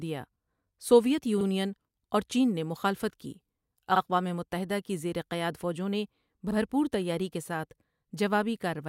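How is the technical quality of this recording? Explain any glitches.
The speech has one recurring glitch: overlapping chunks. The audio was handled in 2.5 s blocks, each starting 50 ms before the previous one ended, so that 50 ms plays twice at every join. This produces a brief stutter or click at 1.41, 3.96 and 6.51 s.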